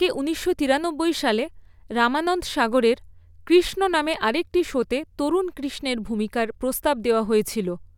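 Speech, with no technical fault to point to anywhere in the clip. Nothing in it stands out as a dropout, distortion or other defect at any point.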